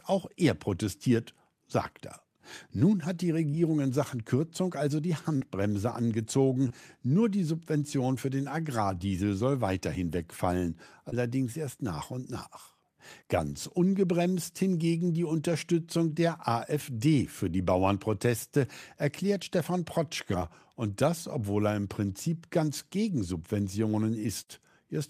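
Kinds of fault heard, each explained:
Short concealed packet loss: bits of this speech arrived too late to decode, around 20 to 40 ms each, six times between 3.51 and 24.49 s, and the receiver papered over each gap by stretching the preceding sound, pitch-based when voiced, noise-like when not, before easing back into real audio. You hear quick smears or wobbles, e.g. right after "hat die", between "soll weiterhin wegfallen" and "erst nach und", and just before "und das obwohl er".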